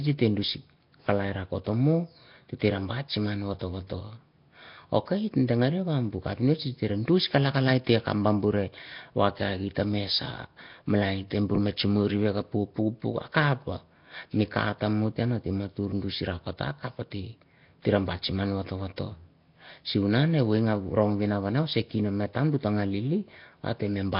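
Nellymoser compression runs throughout the speech, from start to finish. The likely cause is Flash's Nellymoser Asao microphone codec at a low rate, with damage that fits roughly 22 kbps. It codes short blocks with very few bits, so weak bands are discarded and refilled with noise, and nothing survives above about 5.3 kHz. The result is heavy: a rough, hissy halo around the speech, muffled top end, and a smeared, underwater quality.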